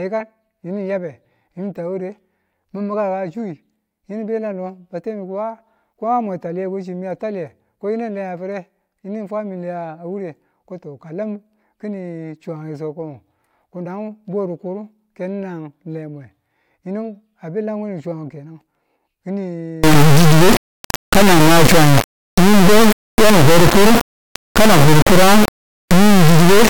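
Integer read as float begins at 19.84 s and runs to the end of the clip. The speech gives way to a harsh, extremely loud buzzing square wave that cuts to silence wherever the sound is very quiet. This fits 32-bit integer samples being read as 32-bit floats: most bit patterns then decode to values near zero or far beyond full scale, so the output slams between silence and the clipping limit.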